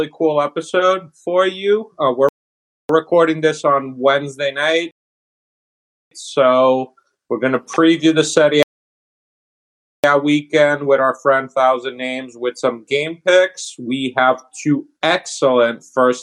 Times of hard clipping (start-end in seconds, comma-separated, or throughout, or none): none